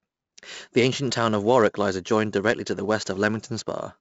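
4-bit ADPCM compression runs through the whole speech clip. Each sample is coded as a coarse step from a prediction, so heavy gritty hiss rides on every loud syllable. Sharp onsets distort. Nothing sounds above 7.7 kHz, which fits a 64 kbps stream.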